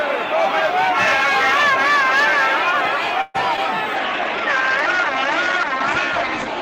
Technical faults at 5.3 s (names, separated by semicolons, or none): call bitrate drop